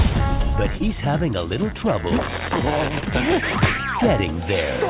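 At 0.77 to 0.83 s and again at 2.99 to 3.05 s there is short concealed packet loss: roughly 30 ms of audio failed to arrive in time, and the receiver papered over each hole by stretching the preceding sound before easing back in. Each is heard as a brief smear or wobble, not silence or a hard click, which separates it from a plain dropout, all within a band that stops at 4 kHz, consistent with a G.711 call path.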